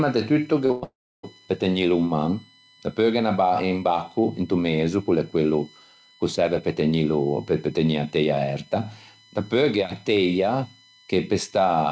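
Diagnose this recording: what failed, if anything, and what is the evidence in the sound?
A USB whine runs through the whole clip. It is a fixed tone on a 1 kHz fundamental, with its strongest component at the 4 kHz harmonic. It sits about 30 dB below the speech. The stage is analogue wiring, at the power or ground shared with a USB device. The bus polls in 1 ms frames. That current leaks into the audio as a 1 kHz whine and its multiples. It stays in the clip up to the band edge near 8 kHz, which fits a G.722 call path.

A short concealed packet loss starts at 0.66 s, just after "de tutto", and runs to 0.72 s. About 40 ms of audio never arrived in time. The receiver filled roughly 38 ms by extending the last sound, then crossfaded back. It is heard as a brief smear on the speech. The stage is the network, and the call's concealment hides the gap.

A burst of packet loss follows at once, from 0.72 to 0.84 s. 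About 100 ms is missing. The concealment filled it with about 103 ms of continued sound that fades as it goes. There is no true silence. Several packets in a row were lost or arrived too late to play. The receiver kept extending the last frame and turned it down. This is again a network fault.

A long dropout runs from 0.84 to 1.25 s and ends as the audio returns on "pe tegnîlo in". About 0.4 s of speech is gone. The concealed sound fades out, and about 300 ms of silence follows. The speech then resumes further along, with the middle lost. The likely cause is a long network dropout that left the jitter buffer empty. Concealment can only cover the first part of a gap this long.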